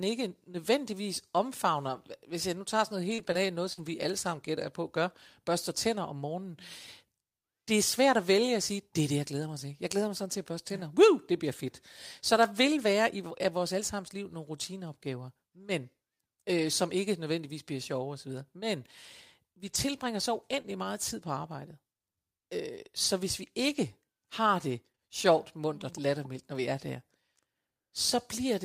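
A choppy, robotic patch cuts into this speech recording from 3.09 to 3.79 s, where the sound briefly stutters with pieces missing. That is repeated packet loss (robotic sound): three holes landed close together, totalling 80 ms with the longest 46 ms, and the receiver filled each by stretching the preceding sound, so about 12 percent of that stretch is synthetic continuation. Later, from 19.67 to 25.38 s, the speech stays clear but carries brief ticks and small smears. These are scattered short gaps, around seven isolated holes of about 20 ms at most, 120 ms lost in all, each patched by extending the last sound. Only about 2 percent of the span is concealed, and the repair added 37 ms of extra length.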